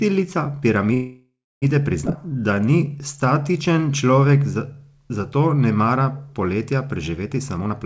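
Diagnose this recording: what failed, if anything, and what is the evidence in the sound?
From 0.94 to 1.64 s the sound halts and the last fragment is drawn out as a fading buzz, ending in about 0.28 s of silence. Nothing is lost afterwards, so about 0.68 s was inserted. This is a call audio freeze, likely from packets delayed on the network draining the jitter buffer. A dropout would lose audio instead.

Around 2.06 to 2.08 s the audio jumps forward with almost no gap. About a third of a second is simply gone, with the two sides butted together. This skip ahead happens at the network or jitter-buffer stage. Unlike the freeze, content is missing rather than delayed.

From 2.17 to 4.79 s the audio plays at about 89% speed, adding roughly 0.3 s, with sounds stretched but pitch unchanged. This jitter buffer slow-down comes from repeating pitch periods to rebuild the reserve. A tape-style slowdown would lower the pitch as well.

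Just after "mara poletja", from 7.36 to 7.73 s, the audio runs hurried at about 128% speed and roughly a tenth of a second is removed. Pitch holds steady through the G.722 call path, which has nothing above 8 kHz. This jitter buffer speed-up trims excess delay by cutting short pitch-period pieces. It differs from the skip ahead because the removal is spread across the stretch, with no single jump.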